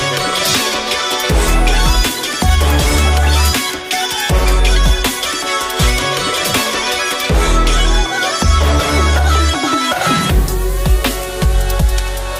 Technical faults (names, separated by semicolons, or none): DAB burbling